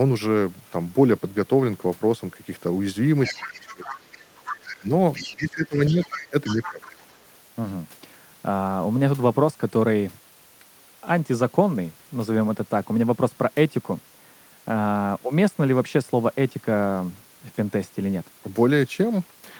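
From 3.24 to 4.78 s a second, fainter voice sits about 10 dB under the talker, then returns more weakly, around 15 dB down, at 5.13 to 5.36 s and 5.86 to 7.15 s. This is the other side's voice leaking through, likely loudspeaker echo the canceller failed to remove. Overlapping this, from 3.37 to 7.01 s, the talker's speech dips and breaks up for roughly two seconds in total, falling by as much as 20 dB. This is speech suppressed in double talk, likely the echo canceller turning down both voices while both sides spoke.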